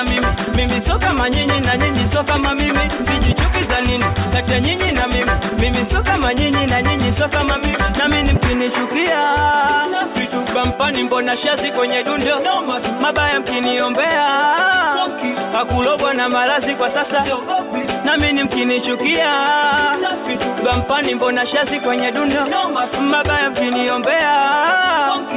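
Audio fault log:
No faults are audible anywhere in this recording.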